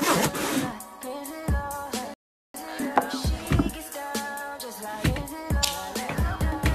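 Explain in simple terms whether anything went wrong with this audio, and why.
Something did go wrong: at 2.14 s the sound drops to silence and picks up again at 2.54 s, right where it left off. That's a rebuffering stall: the player ran out of downloaded audio and waited about 0.4 s for more, so nothing's missing, it just runs late.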